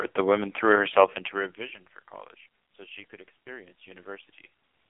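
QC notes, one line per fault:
Throughout, AMR narrowband mobile codec: the speech is squeezed into a phone band of roughly 200 Hz to 3.4 kHz, with nothing above 3.5 kHz. It sounds heavily buzzy and synthetic, which points to the very low 5.9 kbps mode, where too few pulses are left to model the voice.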